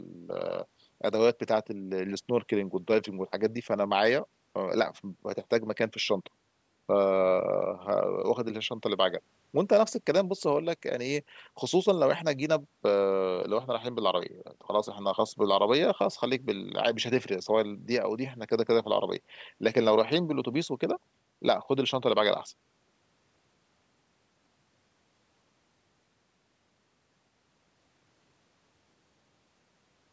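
Listening through this speech recording, nothing stood out as a technical problem, and the thinned low bass and lack of content above 8 kHz are just what call microphone processing normally leaves behind.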